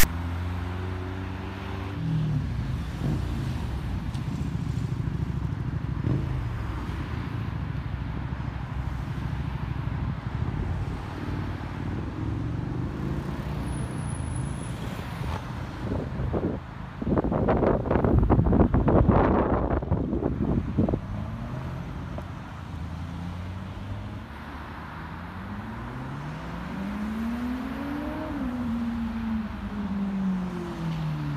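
Right at the start, from 0.00 to 0.04 s, there's file tags played as audio: text metadata decoded as samples, giving a short, hard-edged, lopsided rasp.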